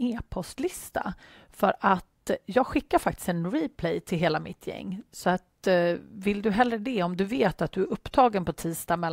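No technical faults are audible.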